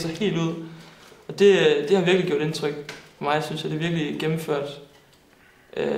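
No technical fault can be heard anywhere in the recording, and the signal stays continuous throughout.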